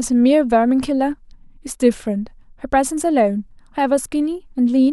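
No technical faults are audible anywhere in the speech recording.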